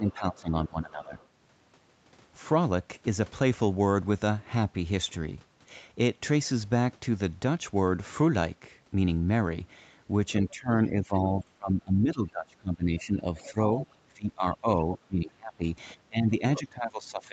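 Speech suppressed in double talk runs from 0.0 to 1.18 s: the speech dips by up to about 15 dB for roughly a second, likely because the echo canceller turned everything down while both sides talked at once. Within that stretch, at 0.07 to 0.13 s, the other side's voice leaks through as a short scrap about 20 dB below the speech, likely loudspeaker echo the canceller failed to remove from the microphone. At 1.04 to 1.27 s it leaks through again, much fainter at about 35 dB down, likely the same incomplete echo removal.

Speech suppressed in double talk returns from 10.41 to 13.57 s. For around three seconds the speech sinks by as much as about 20 dB, likely as the canceller clamped down on the overlapping talk. Near its end, from 13.36 to 13.94 s, the other side's voice leaks through more strongly, only about 15 dB below the speech, likely residual echo.

From 14.06 s to the end, speech is suppressed in double talk once more, dropping by up to about 20 dB, likely the canceller again confusing the talker with the far side. 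A brief fragment of the other side's voice leaks through at 16.55 to 16.60 s, about 15 dB below the speech, likely echo that escaped cancellation.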